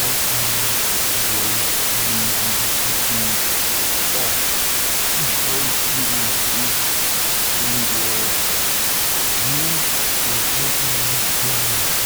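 You've got a wrong sample width problem across the whole clip: it plays at half speed, an octave low, under heavy noise. That fits 32-bit integer data read as 16-bit, so every other value comes from low-order bytes and only the rest carry the real signal's top bits.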